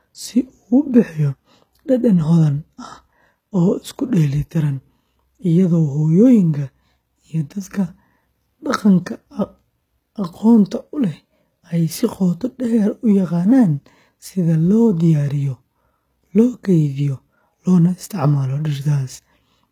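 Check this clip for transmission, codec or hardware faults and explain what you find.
Two faults are present: codec damage across the whole speech clip, and added roughness in the later part.

Throughout, sibilants sound gritty and lispy, the treble is bright but synthetic, and nothing reaches above 14.9 kHz. The likely cause is HE-AAC compression at a low bitrate, plausibly near 20 kbps, where spectral band replication copies lower bands upward, so the rebuilt highs don't match the true harmonics.

From 6.26 s to the end, a hiss-like roughness rides on the speech, strongest on loud and bright sounds and absent in pauses. This is sample clock jitter: the converter's timing wanders by a few microseconds, so steep waveform slopes are sampled wrongly, leaving an error roughly 40 dB below the signal.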